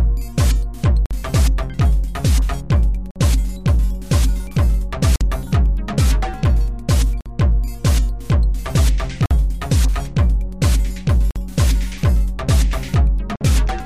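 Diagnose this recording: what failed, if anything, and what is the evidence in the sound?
The failure is a gap between chunks, introduced at the storage or playback stage where the audio was handled in 2-second blocks. Hard-edged silences of 50 ms open at 1.06, 3.11, 5.16, 7.21, 9.26, 11.31 and 13.36 s, spaced every 2.05 s: one chunk plus its gap. Nothing is missing, but each join is delayed by padding or a late start. A waveform shows flat silent slots with abrupt edges. A spectrogram shows thin, fully blank vertical stripes at those times.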